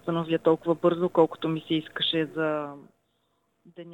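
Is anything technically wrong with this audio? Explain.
No, nothing in this audio stood out as a technical problem on listening.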